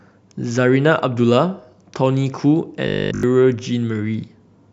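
From 2.87 to 3.23 s, new audio likely stopped arriving in time, so the playback repeated a short buffer of roughly 20 ms over and over. That is robotic sound from repeated short buffers: the speech becomes a rigid, metallic 50 Hz buzz throughout.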